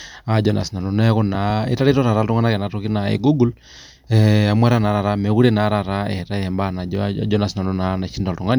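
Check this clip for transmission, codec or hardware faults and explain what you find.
One hardware fault is present, a loud pop. Right after "naa sinanu neeku", at 1.35 to 1.52 s, two sharp pops land in quick succession, peaking a few decibels above the speech, which carries on underneath. The cause is likely a brief voltage pulse from a plug, switch or static discharge entering the signal path and being shaped by the circuits after it.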